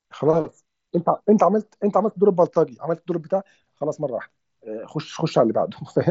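Nothing goes wrong anywhere in this speech clip; the Bluetooth mSBC headset link carrying it at 61 kbps is simply doing its ordinary job, and there's nothing to flag.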